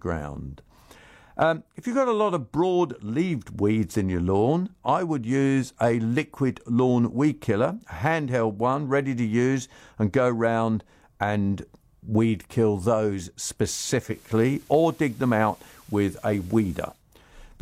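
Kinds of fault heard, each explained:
Digital radio blending to analogue: the receiver drops to the station's FM broadcast from 13.98 to 17.04 s, cross-fading over 216 ms. A spectrogram shows a faint hiss floor roughly 30 dB down; the waveform level shifts about 1 dB.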